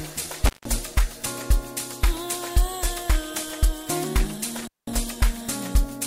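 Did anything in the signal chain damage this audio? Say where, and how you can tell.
Yes, in the analogue wiring: an intermittent contact, a loose cable or plug briefly opening the line. The sound cuts out twice, between 0.46 and 0.66 s with the line open for about 160 ms, and between 4.59 and 4.95 s with it open for about 200 ms. Each dropout is bracketed by crackle as the connection breaks and remakes, and only faint hiss remains while the circuit is open.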